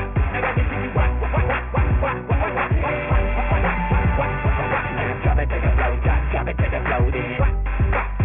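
Aliasing throughout: the sound folds back around 3 kHz, which points to a drop to a 6 kHz rate without filtering, leaving gritty, metallic false tones roughly 15 dB down.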